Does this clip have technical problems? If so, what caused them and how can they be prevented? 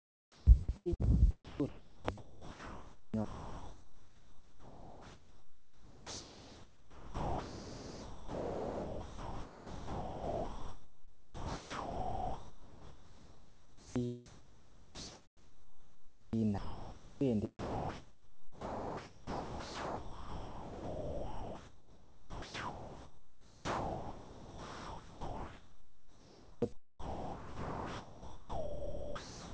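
Yes. Sound chopped by the voice detector occurs from 0.0 to 1.07, 1.45 to 14.01, 14.26 to 17.21 and 17.59 to 29.54 s. Sound in these stretches is replaced by comfort noise. This is likely caused by sender-side voice activity detection gating too aggressively. To prevent it, disable discontinuous transmission or lower the detector threshold.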